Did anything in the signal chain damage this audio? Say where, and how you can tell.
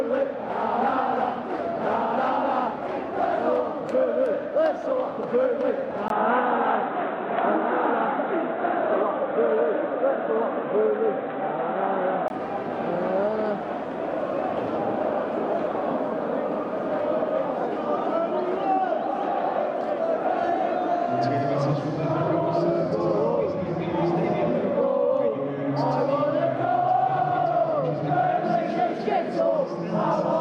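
Yes. From 6.08 s to 12.30 s the sound turns dull and boxy, then opens up again. The likely cause is the input switching to a poorer device at the capture stage. A spectrogram shows a 20 ms gap at 6.08 s, then content ending in a hard shelf at 3.9 kHz with a faint new noise floor roughly 55 dB below the signal. The waveform level stays about the same, so only the bandwidth, tone and noise change, until full bandwidth returns at 12.30 s.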